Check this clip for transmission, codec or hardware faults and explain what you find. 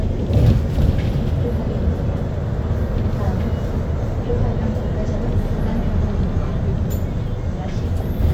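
I checked this clip and found no faults to explain.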